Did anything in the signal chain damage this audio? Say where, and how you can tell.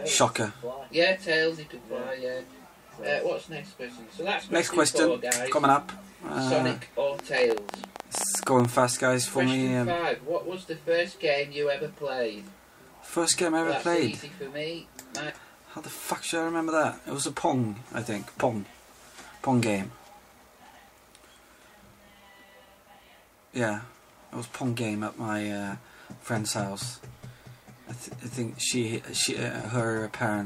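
Yes: a train of clicks, 7.19 to 8.66 s, uneven pulses at 14.4 per second, about 15 dB above the sound. It's likely analogue interference, a faulty connection or a faulty supply.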